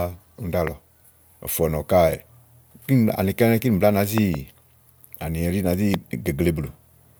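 A sudden voltage pulse, likely from a plug, switch, static discharge or driver glitch, gets added to the signal three times, heard as a loud pop over speech that carries on underneath. The first, at 0.67 to 0.69 s, jumps roughly 10 dB above the speech. From 4.18 to 4.36 s comes a double pop, two thumps in quick succession, and at 5.94 to 5.96 s a single pop, both peaking about 15 dB over the speech.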